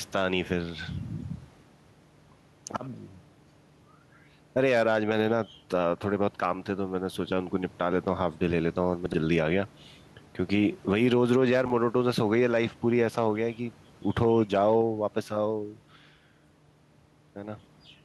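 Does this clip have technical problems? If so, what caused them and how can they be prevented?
Yes. Gain pumping runs through the whole speech clip. The room noise sits about 35 dB below the speech, and the gain swings by roughly 5 dB. This is likely caused by the input gain being set far too high for the microphone, so that a fast limiter or compressor keeps clamping down on the peaks and releasing in the gaps. The result is squashed dynamics. To prevent it, lower the preamp gain so that peaks sit well below the limiter threshold, and use a gentler ratio or a slower release.

Chunks out of order appear at 9.06 to 9.14 s and at 11.66 to 11.70 s. In each case a short block of audio plays after material that should have followed it. Each block is about 20 ms. At 9.06 s the block lands three blocks late, and at 11.66 s it lands one block late. No audio is missing, but each event creates hard joins that make a brief jumbled moment in the speech. 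To prevent it, use a reordering buffer, sequence numbers or timestamps so that late blocks are slotted back into place before playback or writing.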